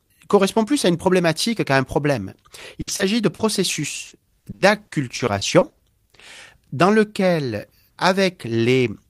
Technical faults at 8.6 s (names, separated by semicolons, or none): none